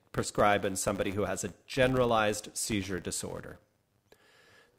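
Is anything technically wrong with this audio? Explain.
Yes. Throughout the speech, a 100 Hz buzz rises and falls with the level. This is the filter restarting on every block: each 10 ms block starts from zero and begins with a small click.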